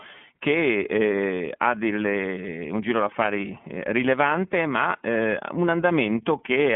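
Speech heard through a narrow, slightly rough and synthetic filter for the whole clip, with nothing above 3.6 kHz and a plainly audible coding grain. This is the iLBC codec: each frame is coded independently, a texture that fits 30 ms frames at about 13.3 kbps.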